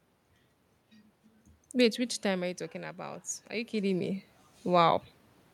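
Speech, with an automatic gain rising fault from 1.78 to 4.97 s. After the input drops by about 9 dB, the gain control slowly lifts its gain by about 8 dB. The voice and the room noise swell up together over roughly three seconds instead of the level holding steady.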